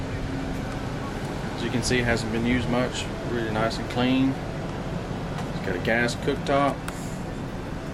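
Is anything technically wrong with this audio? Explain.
No, there is nothing technically wrong with it.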